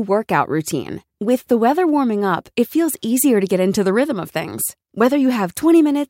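Listening to the speech, nothing stood out as a technical fault at any point.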